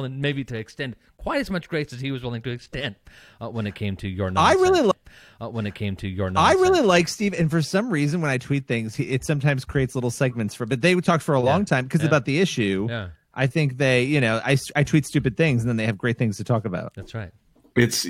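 At 4.90 s the stream segment repeated: the player fetched or queued the same piece of speech twice, so about 2.0 s replays until 6.90 s after a small blip at the jump back. On a waveform or spectrogram, that stretch appears duplicated, with a sharp discontinuity at the seam.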